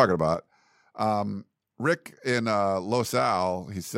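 One channel drops out at 0.35 s and stays out to the end of this speech clip: the level falls abruptly by about 6 dB, likely because one side of a stereo feed went silent, so the mono sum carries only half of what both channels shared.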